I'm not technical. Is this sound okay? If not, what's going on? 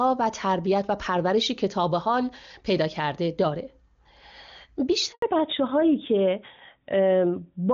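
No. At 5.12 s there is a handover gap. The phone switched the call to another network, and for about a tenth of a second, until 5.22 s, nothing got through. The sound cuts out quickly and then returns.

Right after that, at 5.22 s, comes a fallback to narrowband. Before this point the call used HD Voice and sounded clear. From here to the end, everything above 4 kHz is gone. The speech sounds duller, muffled and rougher.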